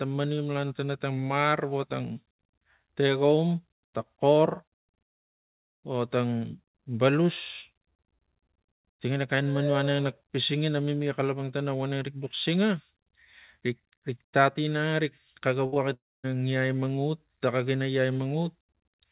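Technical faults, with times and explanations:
15.66–15.74 s, burst of packet loss: about 60 ms never arrived, so the receiver stretched the last sound and faded it out before resuming later, skipping the lost stretch.
15.74–15.78 s, short concealed packet loss: roughly 20 ms went missing right after, patched by continuing the previous sound briefly, heard as a quick smear blending back in.
15.94–16.26 s, long network dropout: sound continues as a decaying buzz or hiss then goes silent for about 240 ms, likely from no packets arriving; about 300 ms is missing.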